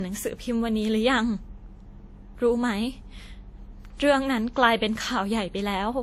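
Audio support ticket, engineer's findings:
Likely transcoding between lossy codecs; artefacts fit WMA re-encoded to Vorbis near 46 to 48 kbit/s. Throughout the speech: two layers of codec smearing, no content above 15.7 kHz.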